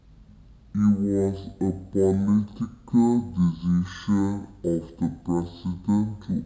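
From the start and throughout, the speech is a stereo file read as mono: alternating left and right samples were taken as one channel, so it plays at half speed, an octave low. A spectrogram shows stretched, lowered harmonics plus a faint mirrored copy in the upper half.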